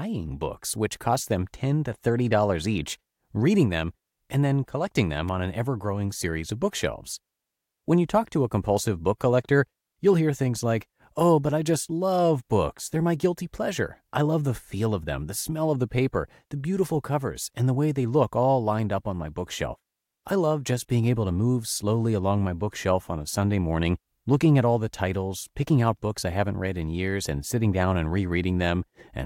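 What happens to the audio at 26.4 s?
At 26.4 s the speech carries on intact, with no dropout, click, distortion or other fault to be heard.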